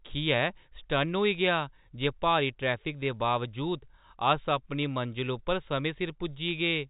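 Speech heard through telephone-band G.711 coding, with nothing above 4 kHz, carries clock slip clicks from 0.11 s to 6.89 s: a soft, evenly spaced rattle roughly every 20 ms. The likely cause is two unsynchronised clocks differing by about 0.1%, each slip dropping or repeating one sample. The strict regularity and absence during pauses set it apart from random crackle or packet loss.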